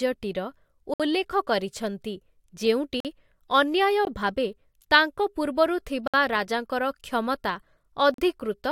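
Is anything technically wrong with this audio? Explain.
Yes, there's a gap between stream segments, showing up five times: at 0.94 to 1.00 s, 3.00 to 3.05 s, around 4.05 s, 6.08 to 6.14 s, and 8.14 to 8.18 s. The speech seems to arrive in 1-second chunks, and at these joins the timestamps of one segment don't quite meet the next, so the player pads the hole with silence. You hear brief hard-edged dropouts of about 20 to 60 ms, but no speech actually goes missing.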